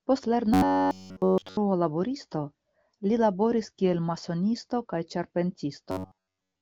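From 0.54 to 1.57 s and again from 5.91 s onward, audio likely arrived too seldom, so a 10.7 ms buffer was replayed over skipped material. This robotic sound from repeated short buffers imposes a metallic 93.8 Hz buzz, throughout the first stretch and over most of the second.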